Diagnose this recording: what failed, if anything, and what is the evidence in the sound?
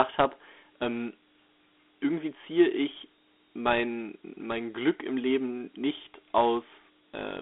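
The failure is at the codec stage: the speech has been through Dialogic VOX ADPCM, the 4-bit OKI scheme used for phone menus and voicemail. Across the whole clip the band is confined to roughly 250 Hz to 3.5 kHz, with nothing at all above 3.8 kHz, and a gritty, granular hiss rides on every syllable. Coding each sample as a 4-bit step from the last prediction cannot track speech finely, and the resulting quantisation noise follows the signal level. The sound fits a 32 kbps stream at 8,000 samples a second.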